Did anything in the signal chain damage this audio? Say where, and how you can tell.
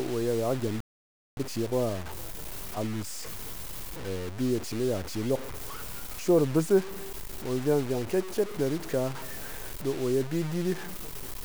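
Yes. Throughout the clip the speech carries a harsh, grainy distortion that rises and falls with the voice, sitting only roughly 15 dB below it, and quiet stretches sputter. This is low bit depth without dither, likely from a sample-format conversion truncating to 5 bits.

At 0.81 s the speech cuts to silence mid-flow and resumes at 1.37 s, a gap of about 0.56 s. That is a playback stall: the output buffer likely ran dry, or the audio thread was blocked, until data arrived again.

From 1.37 s to 4.37 s the speech sounds hurried, about 1.1 times normal speed, yet keeps its normal pitch. This is time-compressed catch-up, where the player trims and cross-fades small segments to clear the backlog left by the stall.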